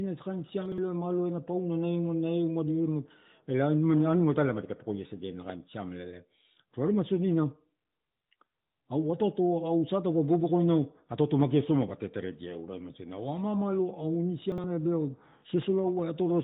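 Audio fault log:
0.66–0.78 s and 14.52–14.64 s, chunks out of order: two brief jumbled stutters. In each, a 60 ms chunk plays one chunk late, after the piece that should follow it. Nothing is missing, but the wrong order leaves three hard joins.
5.50–5.52 s, loud pop: a single sharp pop, peaking around 5 dB above the speech, while the speech continues beneath it. The likely cause is a sudden voltage step or pulse, as from a switch, static or a driver glitch, added to the signal and briefly shaped by the following circuitry. The clip runs through the narrowband AMR-NB path at 12.2 kbps, with nothing above 3.8 kHz.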